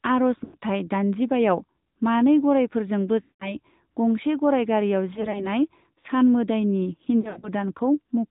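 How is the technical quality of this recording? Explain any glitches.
Technical quality is limited: the speech is band-limited and buzzy throughout, with four brief dropouts where the sound smears and fades.

Throughout, nothing above 4 kHz comes through and the speech has a plainly audible synthetic buzz. This is the AMR narrowband mobile codec, which rebuilds speech from a vocal-tract model and a few pulses per subframe. The degree of damage points to a mid-rate mode of about 10 kbps.

At 0.44–0.56 s, 3.22–3.55 s (ending just before "गंसे गराय"), 5.14–5.45 s and 7.22–7.49 s, the sound is drawn out, warbles and dips or fades before recovering roughly. These are lost AMR speech frames. The decoder repeats the last good pitch and filter settings at falling gain. The first two losses are continuous, about 100 ms and 180 ms long, and the second fades close to silence. The last two are scattered over about 200 ms, so they sound like stuttering dips rather than a single fade.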